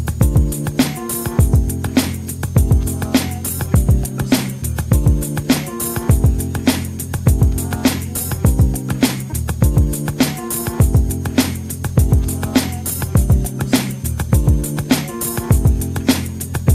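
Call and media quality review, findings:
High whistle, present throughout, pitch wandering between about 6.3 and 6.8 kHz, roughly 35 dB below the programme level. Switching supply whistle. Probable component: a switching power supply feeding the capture or playback chain. Mechanism: converter dropping into audible burst mode at light load, or beating against a second supply. Pitch drift follows changes in load. Coupled into audio via supply rail or ground.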